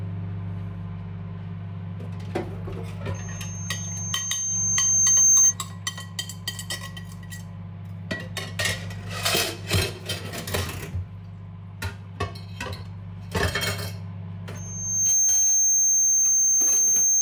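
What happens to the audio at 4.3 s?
At 4.3 s the audio is caught in a loudspeaker feedback squeal that runs from 3.14 s to 5.54 s. A microphone is picking up the loudspeaker it drives. At one frequency the loop gain exceeds one, so that tone feeds itself. Here it is a 6.3 kHz whistle. It swells over about two seconds until it sits roughly 15 dB above the sound. It then stops at 5.54 s.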